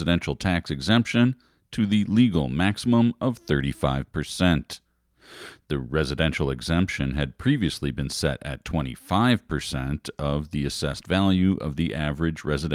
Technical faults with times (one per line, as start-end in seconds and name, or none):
none